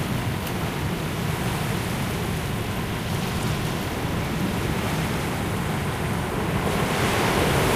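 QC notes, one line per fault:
1.28 s, 3.09–3.11 s, 4.76 s, 6.30–6.33 s, 7.32–7.34 s: compressed frames skipped. At each of these the audio lurches forward, losing roughly a tenth of a second at 1.28 and 7.32, around 150 ms at 3.09, and about a fifth of a second at 4.76 and 6.30. The jump sizes fit whole frames of roughly 46 ms going missing or getting rejected by the decoder.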